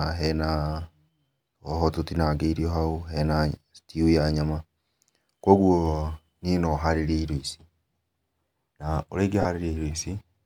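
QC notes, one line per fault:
9.41–9.45 s: lost LE Audio frames. Roughly 40 ms of the speech turns into a brief noisy smear, which fits several consecutive 7.5 ms LC3 frames. The decoder repeats the last spectrum with randomised signs, so the tonal detail blurs into noise.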